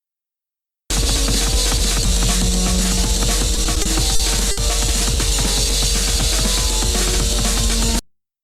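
Repeated stalls (stutter) run from 3.55 to 4.59 s. Across that second, packets kept arriving late or more slowly than they were played, so the jitter buffer emptied six times. Each time, the receiver stretched the last bit of sound to cover the wait, about 160 ms in all, with the longest hold around 60 ms. Nothing is lost, but roughly 15% of that stretch is padding, so the audio drags and hiccups unevenly before resuming its normal flow.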